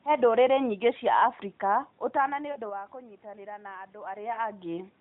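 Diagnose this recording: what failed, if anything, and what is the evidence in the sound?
What broke is in the network stage: lost AMR speech frames from 2.52 to 2.58 s, just after "ũtana nĩ" and before "wa kũnyitanĩra na andũ". For about 40 ms the speech smears into a short drawn-out warble and sags in level, which fits roughly two 20 ms frames dropped on the radio link. The narrowband decoder covered the gap by repeating its last good pitch and vocal tract settings at falling gain. When real frames return, the voice is weak or rough for a moment.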